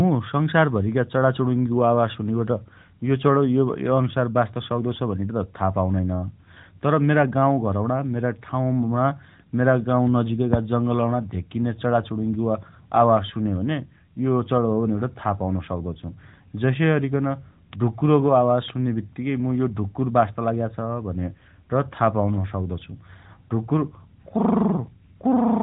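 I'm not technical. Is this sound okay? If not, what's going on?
Yes, there are no faults.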